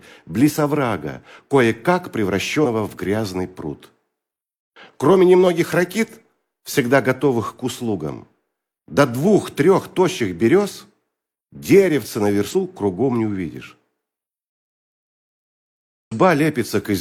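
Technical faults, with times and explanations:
12.50–12.54 s and 16.07–16.13 s, compressed frames skipped: the audio jumps forward, first by a couple of 46.4 ms frames (about 100 ms), then by about five (roughly 200 ms). The missing or rejected frames are never played, so the audio on either side is joined directly.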